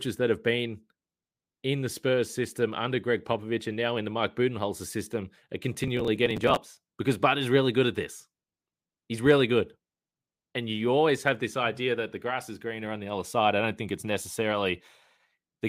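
The processor fell behind its audio deadlines from 5.41 to 6.57 s in this speech clip, skipping around thirty short buffers of roughly 3 ms each. Every skip leaves a hard-edged gap, and together they produce processor overload crackle, a gritty tearing over the speech.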